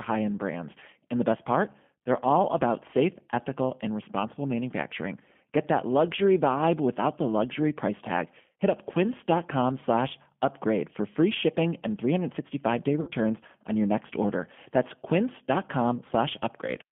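Throughout the recording, the speech carries the sound of the G.729 codec. The band is cut to roughly 150 Hz to 3.4 kHz, so sibilants lose their edge and the low end is thin. The codec rebuilds each 10 ms frame from a vocal tract filter, a pitch predictor and a handful of pulses, which fits an 8 kbit/s line. That reconstruction gives the voice a plainly audible rough, slightly synthetic texture.

From 13.01 to 13.10 s, just before "on your next order", packet loss concealed by the speech codec is audible. About 60 ms of audio is missing, which points to two lost packets. The decoder fills the gap by repeating its last pitch and filter settings at falling gain, so the syllable smears into a brief buzzy tone or coloured noise that fades. Because each frame depends on the previous one, the voice sounds weak or distorted for a short time after packets return.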